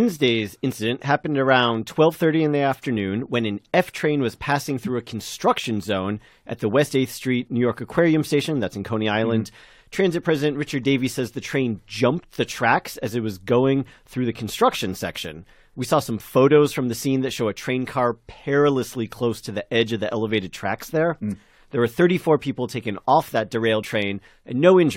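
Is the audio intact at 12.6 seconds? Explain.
No, compressed frames are skipped at 12.57 s, between "the train jumped the" and "as it was going": about 20 ms of audio never decodes, so the audio jumps ahead by that length.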